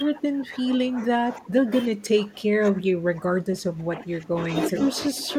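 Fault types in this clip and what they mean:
Speech suppressed in double talk: the speech level sags in uneven stretches across nearly the whole clip, dropping by roughly 15 dB through the first 4.5 seconds and by about 5 dB in two brief patches near the end. This is likely an echo canceller turning down its own talker while the far side was also speaking. On a waveform the envelope pinches inward in these stretches; on a spectrogram the speech energy dims without disappearing.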